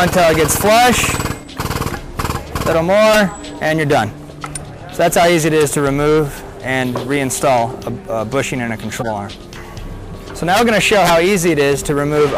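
A compressed frame arrived with flipped bits at 8.99 s, and the decoder played it instead of concealing it, then did the same with the next one or so. This corrupt frame decoded error means misread codes and wrong gain values put energy at frequencies where the sound has none. The result, from 8.99 to 9.09 s, is a brief, harsh burst of chirping noise that cuts across the sound and peaks fairly loud, around -10 dBFS.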